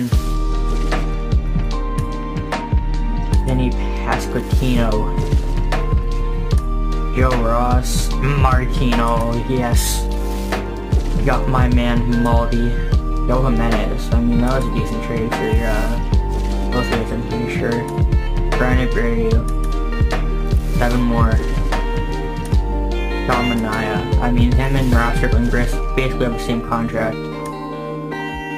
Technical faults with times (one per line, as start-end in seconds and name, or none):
4.22-28.57 crude rate conversion